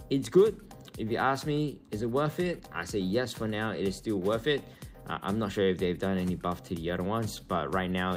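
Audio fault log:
Throughout: clock drift between sender and receiver. The sending end's clock runs roughly 3 percent slow, so audio reaches the receiver a little too slowly to keep its jitter buffer level. The buffer steadily drains and the receiver has to fill the shortfall, which produces small, recurring timing hiccups at uneven intervals rather than one clean dropout, along with a faintly unsteady sense of pace across the whole clip.
0.06 to 7.94 s: repeated timing corrections. To stay in step with the slow sender, the receiver keeps repeating short pieces of audio, all in the same direction, so playback runs at about 97 percent of normal speed. Together these repeats add roughly 0.3 seconds over the stretch. Each insertion is small and unevenly spaced, so it is heard as slight stutters or a gently dragging, uneven tempo rather than distinct glitches.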